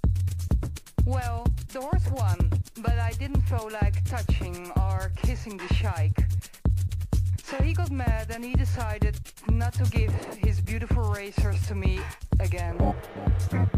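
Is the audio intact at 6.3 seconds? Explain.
No. At 6.3 seconds, as everywhere in the clip, crude rate conversion is present. The sound was resampled by a ratio of 147 to 160, which fits a drop from 48 kHz to 44.1 kHz, by taking the nearest existing sample rather than filtering. The timing errors repeat in a fixed pattern and leave an inharmonic, gritty fizz roughly 35 dB below the signal, most audible on loud and high-pitched material.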